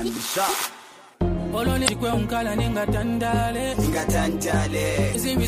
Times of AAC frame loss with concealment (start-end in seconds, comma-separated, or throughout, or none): none